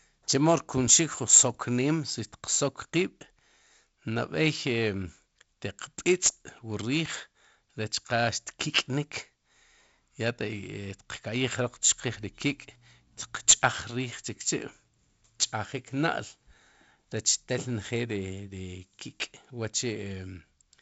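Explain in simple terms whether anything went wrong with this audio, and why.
Nothing went wrong; the recording has no faults.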